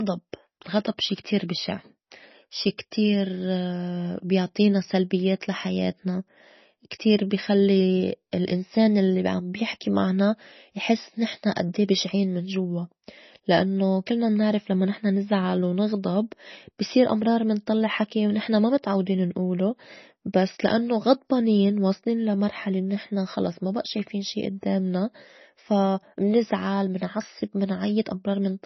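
All the way through, the speech carries heavy MP3 compression, likely from a very low bitrate around 24 kbps: nothing above 5.9 kHz, with watery, swirly sibilants and smeared attacks.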